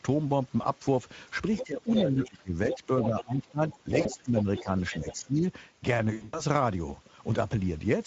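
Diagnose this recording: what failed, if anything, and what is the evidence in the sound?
The speech carries a plainly audible coded texture throughout the 8 seconds, the grainy, excitation-starved character of a low-bitrate CELP coder. This is the Speex codec stage. The sound points to a mode of about 16.8 kbps. At that rate the codec has too few bits to model the excitation closely, so fine detail is replaced by approximated pulses and noise, and any band above 8 kHz is only shaped fill.

Brief stretched, decaying fragments appear at 0.61–0.66 s, 4.01–4.10 s and 6.13–6.43 s. This is VoIP packet loss concealed by the speech codec, a network-stage fault. The first two fit one and two lost 20 ms frames. The third spans about 200 ms, fits roughly nine scattered lost frames, and its longest unbroken gap is 100 ms. During each gap the decoder kept extending its last pitch and filter at falling gain. 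Because each frame depends on the previous one, the speech stays unsettled briefly after packets resume.

A second voice runs underneath the main talker at 1.55–2.27 s (about 5 dB below it), 2.71–3.23 s (about 10 dB below) and 3.70–5.13 s (about as loud as the talker). This is the other side's voice leaking through. It is likely a call-processing fault. The far end was playing on a loudspeaker, and the echo canceller failed to remove it from the microphone signal.

Over 1.61–5.43 s, the main talker is repeatedly pulled down, by up to around 20 dB, for roughly two seconds in total. This coincides with the leaked voice, which points to speech suppressed in double talk, likely in the call-processing stage. With both sides active, the echo canceller could not tell its own talker from the loudspeaker echo. It attenuated the whole microphone path, and the near-end speech went down with the echo.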